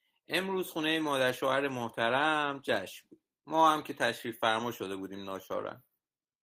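No technical faults can be heard anywhere in this recording.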